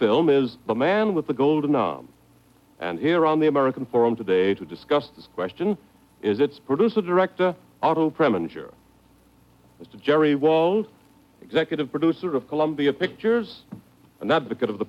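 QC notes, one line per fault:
No faults were found in this clip. Nothing in the audio calls for a QC entry.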